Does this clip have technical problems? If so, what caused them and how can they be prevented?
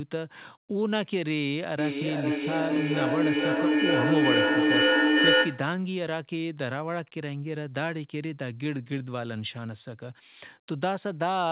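Yes. Feedback echo between two devices runs from 1.78 to 5.83 s. The sound returns roughly every half second, thinner and more ringing each time. It builds to about 7 dB above the speech instead of fading. One device plays the other's microphone signal into the room, and that microphone picks it up again, which neither device's echo canceller can remove. To prevent it, only one device in a shared room should use its microphone and speaker on the call, or everyone should wear headphones.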